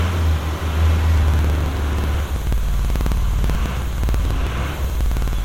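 A background task is stalling the USB bus or audio driver every 54 ms in this clip of sounds, causing periodic USB or driver dropouts from 1.18 s to 5.39 s. Each stall skips roughly 10 ms of audio outright rather than padding it with silence, so the sound jumps forward around seventy times at a steady rate of about 18 per second. This produces a regular ticking or crackling texture that is only audible while sound is present.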